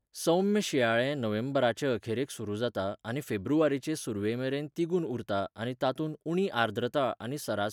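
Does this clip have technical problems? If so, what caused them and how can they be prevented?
No technical faults are audible.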